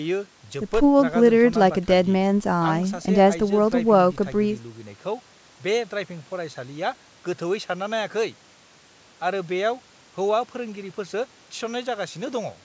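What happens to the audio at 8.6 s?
Nothing goes wrong at 8.6 s: the speech carries on intact through that moment, with only the ordinary call microphone processing audible, its high-pass filter trimming the lowest bass and nothing present above 8 kHz.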